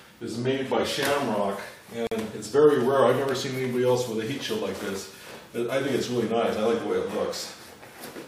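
The audio has a gap at a join of encoded pieces: from 2.07 to 2.12 s, a 46 ms silence cuts into continuous sound, which then resumes where it stopped. Separately encoded segments were joined without trimming encoder delay and final-frame padding. A spectrogram shows a blank vertical band with slightly smeared edges; the waveform tapers down to flat.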